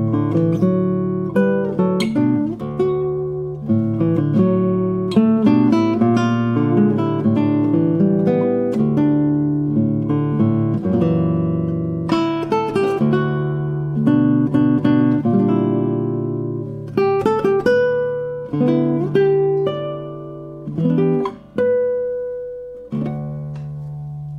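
Nothing technical stands out here, and there's no problem to point to anywhere in the recording.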